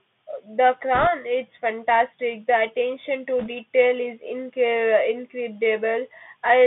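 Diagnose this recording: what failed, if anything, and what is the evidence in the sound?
Bluetooth CVSD headset codec, at the codec stage: throughout, the speech sits between about 150 Hz and 3.5 kHz, with scratchy sibilants and granular hiss. A spectrogram shows a hard ceiling near 3.5 kHz over a fizzy floor, consistent with a 64 kbit/s CVSD link.

Bit errors on a Bluetooth voice link, on the radio link: a rushing crackle at 0.95–1.07 s, just before "it's fantastic", and again at 3.39–3.49 s. Each flipped delta bit carries little weight and fades out, which fits an error rate of a couple of percent. On a spectrogram these appear as broadband noise smears, and the waveform has no click spikes.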